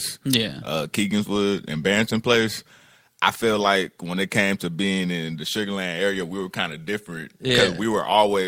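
No technical faults can be heard anywhere in the recording, with the signal level, continuity and timing holding steady throughout.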